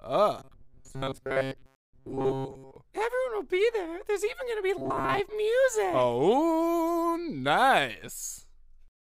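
Audio data likely reached the playback side too seldom, so the software filled the gaps by looping the last short buffer, about 7.5 ms long, while the fresh audio was dropped. The result is robotic sound from repeated short buffers from 0.39 to 2.76 s and again from 4.78 to 5.20 s. Most of the material in those stretches, roughly 70 percent, is repeated, which locks the sound to a rigid, metallic 134 Hz buzz that only loosely tracks the underlying audio.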